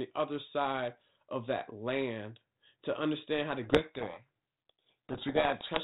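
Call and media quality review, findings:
Codec payload misread, 3.64 s to 5.83 s (clip end): sender and decoder disagree on G.726 code-word bit order, likely a packing mismatch. Misplaced bits yield wrong prediction differences, burying speech in harsh distortion. Earlier audio shows light G.726 coding, consistent with 32 kbit/s.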